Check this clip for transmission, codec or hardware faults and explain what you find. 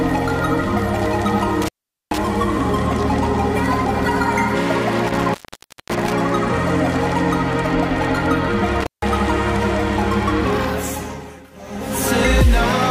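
Three brief dropouts with crackle at their edges, at 1.62 to 2.18 s, 5.08 to 6.13 s and 8.80 to 9.09 s, come from an intermittent contact. A loose plug or cable briefly breaks the signal path, silencing the sound for about 0.43 s, 0.56 s and 0.16 s.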